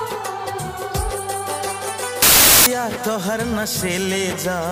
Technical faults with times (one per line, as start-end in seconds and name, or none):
2.22-2.66 samples built from the wrong bytes